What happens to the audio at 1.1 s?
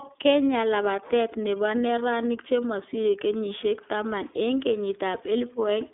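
iLBC codec damage runs through 1.1 s and the whole clip: each 30 ms frame is coded independently, leaving rough, synthetic speech with nothing above 3.7 kHz.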